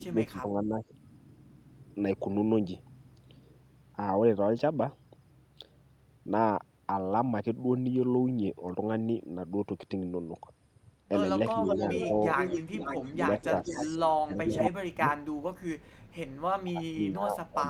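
Speech with two problems. First, speech suppressed in double talk: the talker sinks by roughly 10 dB over 0 to 0.94 s and 11.64 to 12.12 s, then much deeper over 13.09 to 15.06 s and from 16.64 s to the end, likely the canceller ducking both sides. Second, an echo leak from 11.66 to 14.1 s and again 14.57 to 14.66 s: a copy trailing by about 474 ms, around 5 dB under the voice, then about as loud, likely a loudspeaker echo slipping past.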